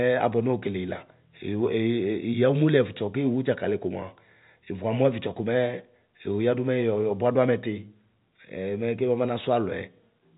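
The speech has no technical fault and comes over a G.711 telephone path, with nothing above about 3.8 kHz.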